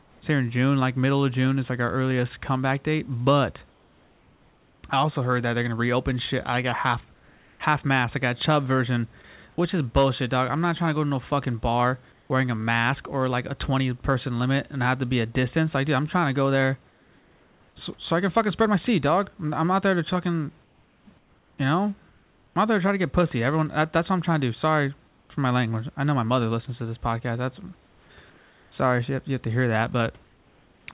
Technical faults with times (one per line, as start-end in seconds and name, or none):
3.70-4.84 comfort noise in place of the background
7.14-7.60 comfort noise in place of the background
12.12-12.30 comfort noise in place of the background
16.90-17.76 comfort noise in place of the background
20.64-22.56 comfort noise in place of the background
25.08-25.30 comfort noise in place of the background
27.88-28.72 comfort noise in place of the background
30.24-30.88 comfort noise in place of the background